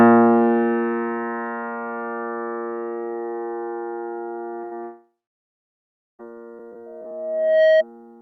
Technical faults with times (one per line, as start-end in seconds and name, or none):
4.61-4.65 short concealed packet loss
4.65-4.73 burst of packet loss
4.83-6.21 long network dropout
6.86-7.84 loudspeaker feedback squeal